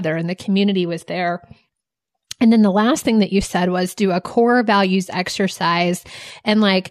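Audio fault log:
No technical faults are audible in this speech recording; the signal holds steady at a consistent level with no interruptions or disturbances.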